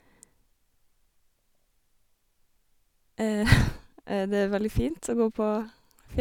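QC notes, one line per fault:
Nothing to flag here; I listened through the whole speech clip and heard no faults at all.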